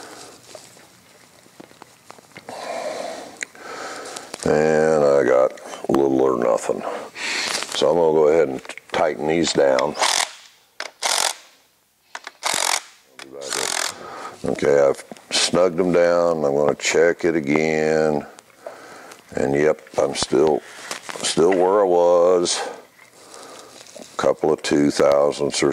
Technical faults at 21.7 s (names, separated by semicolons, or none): none